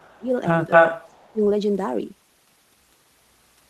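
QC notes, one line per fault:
0.0–0.33 s and 1.08–1.41 s, speech suppressed in double talk: the speech dips sharply, by roughly 25 dB at its deepest, for about 0.3 s each time. Both sides were likely talking at once. The echo canceller could not tell the near talker from the returning loudspeaker sound, so it turned everything down together.
0.09–0.17 s and 0.7–1.32 s, echo leak: a delayed copy of the speech comes back. The first is a faint scrap, far below the speech, about 298 ms late. The second is a longer stretch, delayed about 241 ms, and it is slightly louder than the speech itself. The far end likely plays the call on a loudspeaker. Its echo canceller let part of that pickup through and sent it back.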